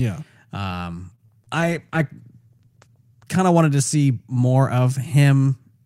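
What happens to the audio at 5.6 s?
Nothing goes wrong at 5.6 s; the speech there is intact, with no dropout, click or distortion.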